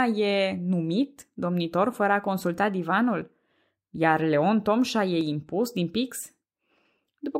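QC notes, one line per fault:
3.22 s and 5.21 s, audio missing between chunks: two tiny skips, the first right after "domnitor fără a consulta", each dropping only a few milliseconds with the edges butted together. Two seconds apart, they likely come from a 2-second chunked recorder losing samples at each handover.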